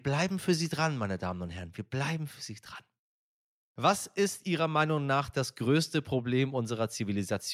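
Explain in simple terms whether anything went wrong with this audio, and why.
Nothing went wrong with this speech recording. No moment in it stands out as a technical problem.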